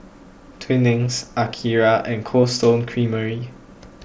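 Speech, carried over a Bluetooth headset link using the mSBC codec, with its 8 kHz ceiling and light graininess on louder sounds. Two brief concealed Bluetooth headset packet losses occur, at 1.06 s and 2.42 s. The first loses about 7.5 ms, the second about 15 ms, consistent with one and two lost frames. The receiver filled each gap by repeating a matching stretch of recent waveform. So the first, a single lost frame, is nearly hidden.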